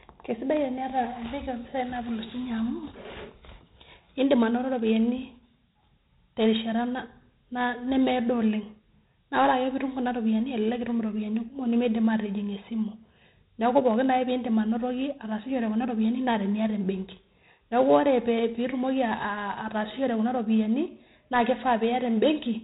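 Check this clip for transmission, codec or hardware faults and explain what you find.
One codec fault runs through the whole speech clip: 4-bit ADPCM compression. Throughout, each sample is coded as a coarse 4-bit step from a predicted value, so heavy error noise tracks the level as gritty hiss on loud syllables and distortion on sharp onsets. The 32 kbps bitrate fits an 8 kHz sample rate, and nothing sits above 3.8 kHz, dulling the sound. A spectrogram shows a hard ceiling there and a level-following noise floor.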